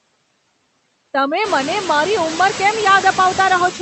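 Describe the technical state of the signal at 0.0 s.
At 0.0 s the speech carries noise suppressor artifacts, which run through the whole clip. The suppressor estimates the steady background in each frequency band and pulls those bands down, here by about 21 dB, so the residue between phrases sinks and then rises under speech. A noise gate would mute everything at once, but this works band by band. The call codec also limits the band at 8 kHz.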